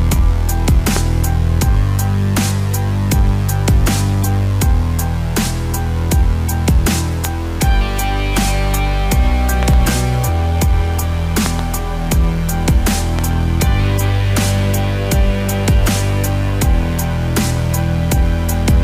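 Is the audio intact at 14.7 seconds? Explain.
Yes, the audio at 14.7 seconds is intact, with no dropout, click, distortion or other fault at that moment.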